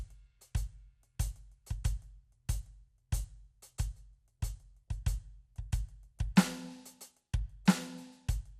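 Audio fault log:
Throughout: MP2 compression, likely at a low rate around 80 kbps. The music sounds dull, with nothing above about 14.7 kHz, because the upper sub-bands get starved of bits and drop out, while the bands that survive are coarsely quantised into that gurgly, granular grit.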